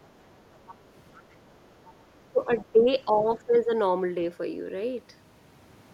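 Right at the start, from 0.03 to 0.07 s, there's a faint scrap of the other side's voice leaking through, buried about 40 dB under the talker. It comes back more clearly from 0.56 to 0.74 s, only around 25 dB down, and once more briefly at 1.87 to 1.91 s. The likely cause is the far end playing on a loudspeaker, with the echo canceller letting some of it slip back into the microphone.

Then the picture flips to speech suppressed in double talk. From 2.33 to 2.49 s and again from 2.73 to 2.80 s, the talker's level sags by roughly 5 dB in short patches. From 3.05 to 3.53 s it's worse, with dips of about 10 dB. That's likely the echo canceller seeing both sides talking at once and ducking everything, the talker included.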